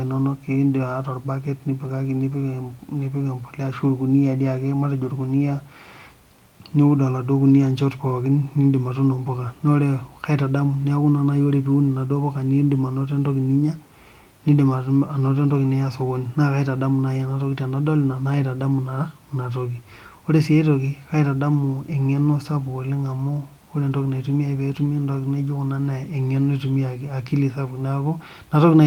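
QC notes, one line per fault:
No faults heard.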